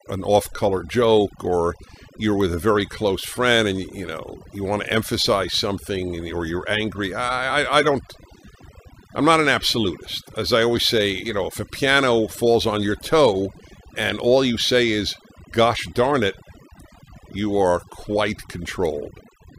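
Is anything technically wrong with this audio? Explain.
Yes, there's overdone noise removal running through the whole clip. The reducer was set so hard it kills bands near its noise estimate, leaving twinkly, near-silent gaps.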